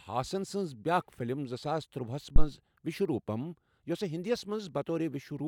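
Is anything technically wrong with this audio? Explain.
Yes. There is a phantom power thump from 2.36 to 2.46 s, right after "فِلم زٕ ساس تُرٛواہس". A supply on the live input was switched. The sudden voltage step passed through the coupling capacitors into the signal path. It comes through as a deep, low thud that peaks at about -9 dBFS. It dies away quickly, with a decay of about 22 ms.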